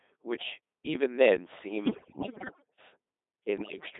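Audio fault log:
throughout Codec 2 vocoder: only pitch, voicing, energy and a spectral envelope are transmitted, consistent with a 2.4 kbit/s mode, so speech is rebuilt from sine waves, heavily buzzy and robotic, confined to 250 Hz to 3.7 kHz.
1.86 to 2.78 s and 3.58 to 3.86 s bit errors on digital voice radio: roughly 15 percent of bits flip, corrupting whole frames' parameters, so the synthetic voice lurches in pitch, level and tone into warbling, bleeping gibberish.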